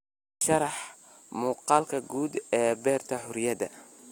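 No dropouts, glitches, clipping or other technical faults are audible anywhere in the speech.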